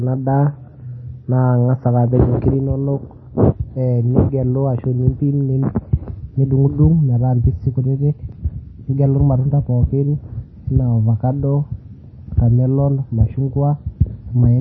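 Throughout, heavy MP3 compression is the likely cause: nothing above 5 kHz survives, and the speech sounds watery and swirly, pointing to a very low bitrate near 24 kbps.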